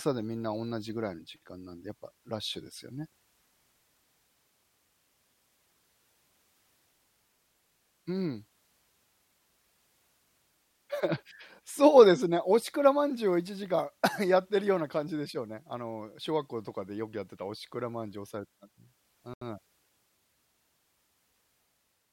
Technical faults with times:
19.34-19.41 Bluetooth stall

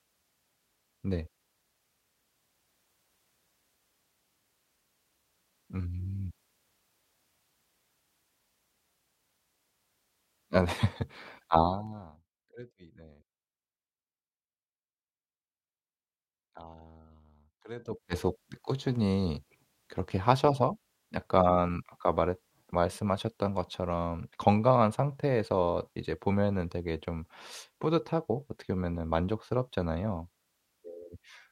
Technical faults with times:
11.61-12.29 zipper noise
17.75-18.09 zipper noise

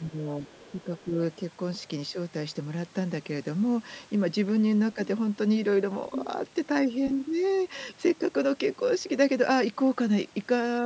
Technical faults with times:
0.00-1.18 speech suppressed in double talk
0.48-1.01 other side's voice leaking through
6.13-6.26 other side's voice leaking through

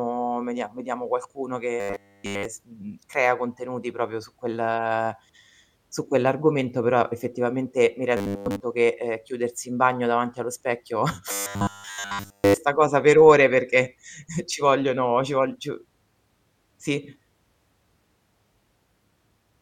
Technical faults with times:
1.80-2.45 robotic sound from repeated short buffers
8.17-8.60 robotic sound from repeated short buffers
11.32-12.57 robotic sound from repeated short buffers

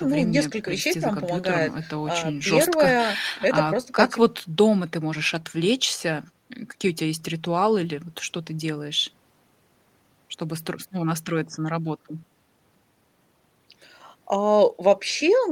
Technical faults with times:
none

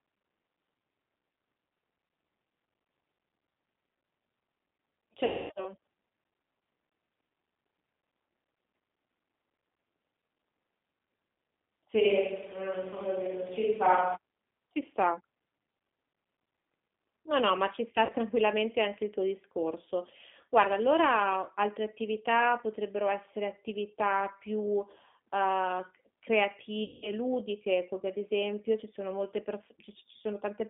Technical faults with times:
0.00-30.69 G.729 codec
5.24-5.71 VoIP packet loss concealed by the speech codec
12.01-14.15 switch to a distant microphone
18.05-18.12 VoIP packet loss concealed by the speech codec
26.84-27.13 VoIP packet loss concealed by the speech codec

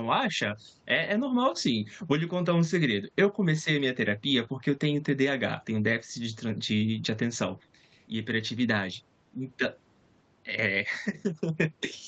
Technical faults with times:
none

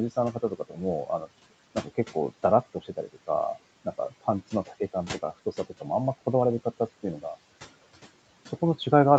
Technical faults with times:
0.00-9.18 noise suppressor artifacts
0.33-0.79 speech cut by the noise suppressor
1.05-1.29 speech cut by the noise suppressor
2.63-3.28 speech cut by the noise suppressor
3.85-4.27 speech cut by the noise suppressor

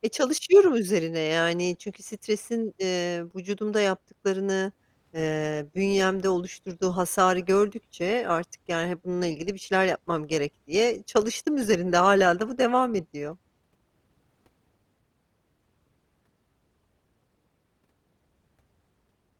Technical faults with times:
none

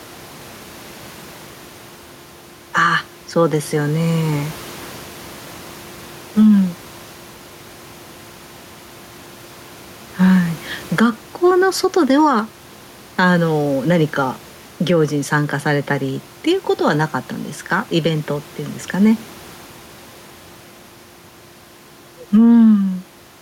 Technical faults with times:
0.00-23.41 gain pumping

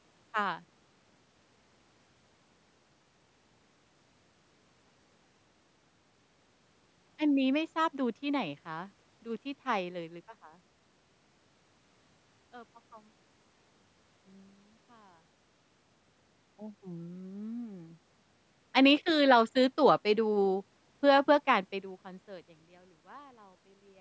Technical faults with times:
none

